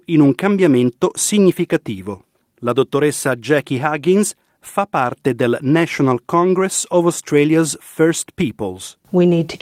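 Nothing's technically wrong in this bit of speech; it's just someone talking, with no dropouts, glitches or distortion to point at anywhere along the way.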